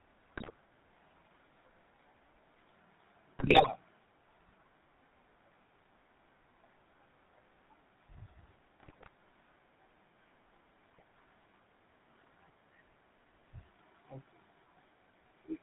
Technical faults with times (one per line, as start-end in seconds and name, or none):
0.00-15.63 GSM full-rate codec
0.36-0.55 GSM bit errors
3.38-3.69 GSM bit errors
8.80-9.08 GSM bit errors
10.86-11.03 GSM bit errors